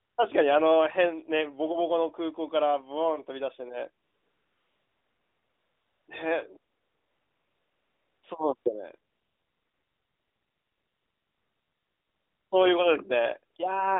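AMR comfort noise fills the pauses at 0.00–0.18 s, 4.04–6.08 s, 6.72–8.24 s, 8.56–8.66 s, 9.12–12.52 s and at 13.54 s. In each gap the phone stopped sending speech frames and the receiver synthesised a smooth, even hiss from a rough level-and-spectrum sketch, so the real room sound drops out and returns abruptly. On a spectrogram these stretches show as flat, featureless grey bands below the 3.6 kHz line ceiling. On the waveform they show as uniform low-level fuzz with hard edges.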